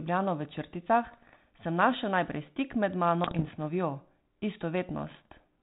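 Pops and rough, crackling bursts with brief jumps in level break into the speech at 1.04 to 1.36 s, 3.23 to 3.59 s and 5.08 to 5.26 s. These are bit errors on an ADPCM link, with a bit error rate of roughly 0.5 to 0.7 percent. Each flipped bit knocks the decoder's step size and prediction off track, so the damage rings on briefly.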